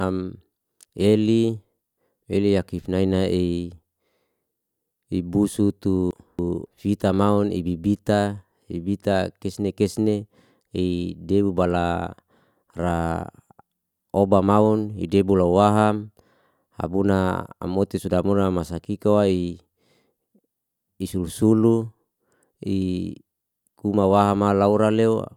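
A speech recording with frames out of order between 6.11 and 6.66 s. Two neighbouring blocks of about 279 ms each, which fits runs of roughly three codec frames, play swapped, causing a garbled flutter. A spectrogram shows vertical breaks where the harmonic contours jump, and the waveform shows abrupt discontinuities at each join.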